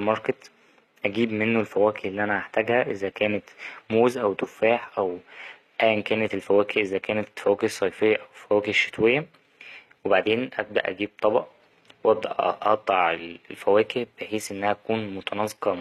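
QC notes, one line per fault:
throughout, HE-AAC compression: treble likely rebuilt by band replication at a low bitrate, fitting about 24 kbps; s sounds turn gritty and lispy, with nothing above 14.9 kHz.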